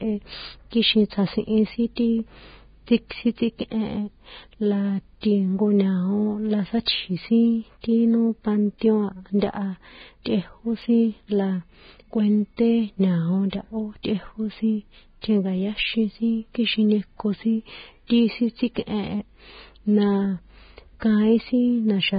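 From start to finish the speech sits behind heavy codec damage, most likely Vorbis compression at a very low quality setting; the grit points to a bitrate somewhere around 15 kbps. The top end has been cut off, and what's left up near the cut-off has been quantised so coarsely that the fine detail has turned into hiss. You hear it as a grainy, roughened texture on the voice, with consonant attacks smeared rather than crisp.

At 10.82 s the audio jumps forward slightly, the likely result of a dropped buffer (overrun). The program didn't read its samples before the hardware wrote over them, so a tiny slice, a millisecond or two, is missing and the audio on either side is butted straight together. There's no gap of silence, just a small skip in the sound.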